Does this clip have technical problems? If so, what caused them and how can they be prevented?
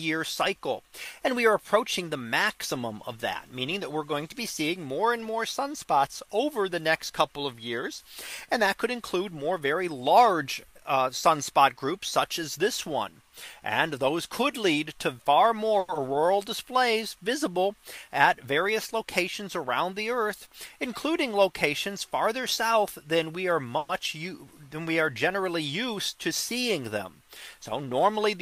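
Yes, there are several network playback faults, all clustered from about 15.8 s onward.

At 15.79 to 15.91 s there is a short stall from a late packet. A packet missed its playout time and the jitter buffer ran dry, so the receiver held the last sound for about 90 ms until the data arrived, then carried on from the same point. Nothing is lost, but that moment is drawn out with a faint buzzy sustain. Prevention: size the jitter buffer to cover the network's real arrival-time spread.

At 15.94 to 15.98 s there is a skip ahead. Right after the stall, audio was already queued behind the delayed packet, and the receiver dropped roughly 70 ms to catch up rather than keep the extra delay. Playback lurches forward with only about 10 ms of fill, so the sound on either side of the cut is spliced almost directly together. Prevention: let the buffer drain gradually through time-scaling instead of discarding queued audio.

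From 16.09 to 17.17 s there is a jitter buffer slow-down. With its reserve depleted, the receiver rebuilt it by repeating tiny pitch-period-sized segments, adding 59 ms over this stretch. The sound plays at about 95% speed without any pitch change, slightly dragged and stretched. Prevention: a steadier network path, or a buffer target that is not pushed so low, avoids the need to refill in a hurry.

From 17.84 to 20.20 s there is a jitter buffer speed-up. Packets that had bunched up left the buffer holding more than its target, so the receiver trimmed short pitch-length pieces to shed roughly a tenth of a second of delay. The audio runs at about 104% speed at unchanged pitch. Prevention: reduce packet bunching with smoother sending and routing, so the buffer does not overfill.

At 23.78 to 23.92 s there is a call audio freeze. The sound stops moving forward, and the final moment is extended as a fading continuation for about 110 ms without dropping to silence. 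It then resumes exactly where it left off, with nothing skipped. The likely cause is packets delayed in transit, leaving the jitter buffer empty until they arrived. Prevention: give the buffer more headroom, or prioritise call traffic on congested links.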